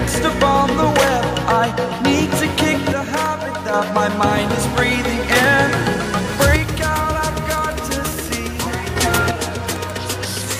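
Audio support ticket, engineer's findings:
One channel drops out at 2.92–3.74 s, 6.56–8.96 s and 9.31 s to end. Level falls abruptly by about 6 dB, recovering after the first two. Likely an intermittent single-channel path, such as a loose connector or cable, before the mono sum.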